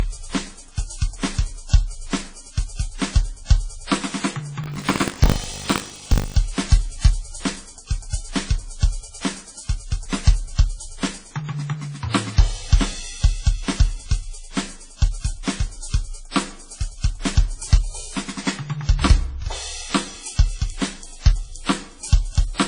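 Throughout the music, the sound was likely passed through two lossy encoders in turn, consistent with transcoding between lossy codecs, perhaps a low-rate WMA then AAC-LC, with layered smearing and swirl. From 4.62 to 6.37 s, buffer tearing: the writer and hardware slipped, so each 20 ms period carries a small slice of audio from a lap earlier, heard as a 50 Hz rattle.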